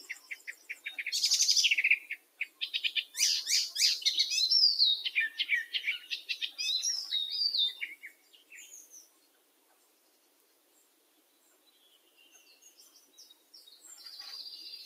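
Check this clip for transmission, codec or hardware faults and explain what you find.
A speech noise suppressor is processing sound it wasn't built for, and in four places it pulls material down hard.

Noise suppressor applied to music or sounds: throughout the clip, the suppressor treats sustained or steady content as background noise and pulls it down, so the level swings by roughly 20 dB as it decides what to keep. Onsets get through but whatever holds or decays sinks, leaving a pumping, thinned texture. Unlike a broadband compressor or AGC, the gain changes follow how steady the sound is rather than how loud, and the ambience drains away instead of rising in the gaps.

Sound cut by the noise suppressor: at 0.19 to 0.85 s the level drops by about 10 dB, and at 2.18 to 2.61 s, 8.03 to 8.52 s and 9.02 to 13.84 s by about 13 dB, the last stretch lasting roughly 5 seconds. Here the suppressor judged the sound itself to be noise, so sustained parts and decaying tails shrink while sharp attacks stay mostly intact. 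A dropout or packet loss would silence everything abruptly; these dips are partial and selective.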